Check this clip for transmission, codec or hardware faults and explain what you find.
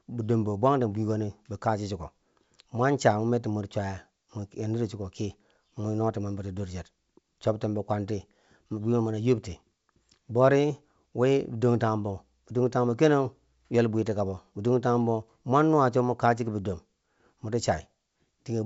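Nothing stood out on listening to this speech, which comes through the 64 kbit/s G.722 wideband telephone path with nothing above 7.7 kHz.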